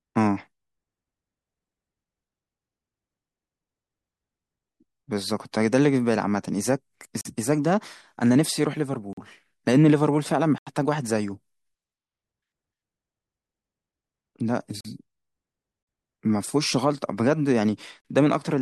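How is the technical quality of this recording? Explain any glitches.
The speech has five dropouts. Each one is a block of digital silence: about 43 ms at 7.21, 9.13, 14.81 and 18.01 s, and a double-length 85 ms gap at 10.58 s. The playback side probably missed its buffer deadline and wrote zeros, and the lengths fit a 2048-sample buffer. You hear a short hole each time.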